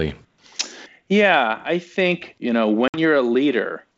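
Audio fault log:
2.88–2.98 s packet loss on an ADPCM call: 60 ms of hard-edged silence (a blank vertical band), then slightly distorted speech while the decoder's predictor resettles.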